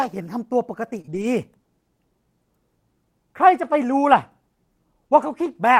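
At 0.97 to 0.99 s a lost packet is rebuilt from error correction. About 20 ms is replaced by the low-bitrate redundant copy carried in the following packet, so nothing drops out, but that slice sounds rougher and noisier than the audio around it.

Two short concealed packet losses follow back to back, at 1.01 to 1.06 s and 1.06 to 1.09 s. Each fits one 20 ms packet that arrived too late or not at all. The decoder extrapolates from the preceding signal, continuing its pitch or shaping noise, for about 22 ms and then about 16 ms before crossfading into real audio. The result is a brief smeared, wobbly stretch.

From 1.09 to 1.23 s the error-correction rebuild returns. About 80 ms of reconstructed audio fits four lost packets recovered from redundant copies. This run has the coarser, noisier texture of the rebuilt frames.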